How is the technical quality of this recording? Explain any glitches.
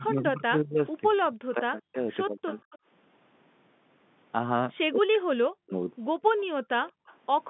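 The recording has three kinds of call-processing fault: the speech is repeatedly turned down, faint echoes come back, and the background drops out once. All of it sits within the telephone band of roughly 150 Hz to 3.6 kHz, which fits G.711 mu-law coding at 64 kbps.

Speech suppressed in double talk occurs from 0.0 to 0.8 s, 1.29 to 2.55 s and 4.9 to 5.73 s. The voice sinks by about 20 dB in the first stretch and by as much as about 40 dB in the later two, fading or breaking into pieces. The likely cause is an echo canceller that heard both sides talking at once and suppressed everything.

Echo leak appears at 1.22 to 1.27 s, 2.54 to 2.78 s and 6.87 to 7.47 s. It is a faint copy of the voice about 30 to 35 dB down, trailing the original by roughly 185 to 190 ms. The likely cause is a far-end loudspeaker whose echo canceller did not remove all of what its microphone picked up, so residue was sent back. 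The fixed delay of almost 0.2 s is what separates it from room reverberation, which smears continuously instead of repeating as a distinct copy.

Background gated by the echo canceller happens between 6.3 and 7.06 s. The room sound briefly drops by about 37 dB, for about 150 ms in total, then returns. The canceller clamped the microphone while the loudspeaker was playing. It differs from double-talk suppression because the room sound vanishes, not the voice.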